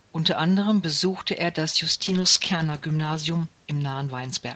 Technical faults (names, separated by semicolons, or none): call bitrate drop